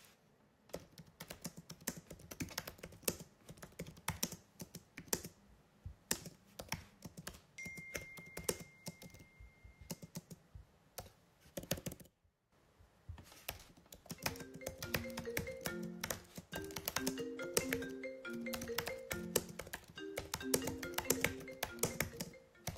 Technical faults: sudden gain jump

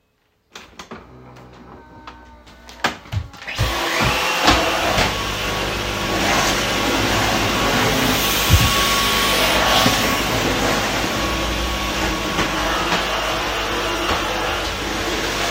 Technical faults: none

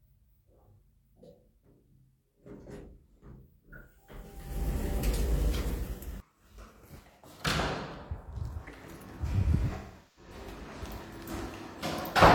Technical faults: AAC frame loss with concealment

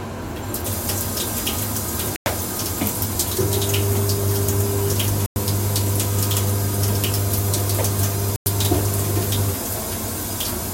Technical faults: gap between chunks

